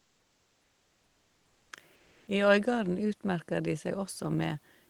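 From 0.00 to 1.71 s, and again from 1.95 to 2.27 s, the speech pauses carry comfort noise in place of the background. The room noise, about 44 dB below the loudest speech in the first gap and about 40 dB below in the second, gives way to a smooth, featureless hiss, about 2 dB quieter in the first gap and about 2 dB louder in the second. The likely cause is discontinuous transmission in the Opus codec: the sender goes quiet during pauses and the receiver synthesises shaped noise to fill them.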